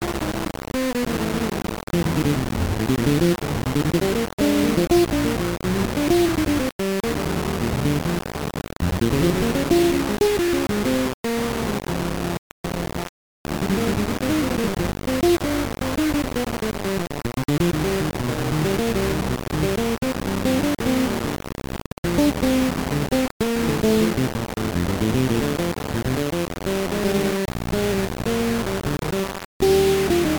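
From start to finish the whole clip carries a heavy, grainy distortion that moves with the sound. The likely cause is low bit depth without dither: it sounds like the audio was rounded to just 3 bits, so the error tracks the signal, and the rounding noise sits nearly as loud as the sound itself. Quiet passages turn harsh and gritty, and the softest moments sputter between a couple of steps or drop out to silence.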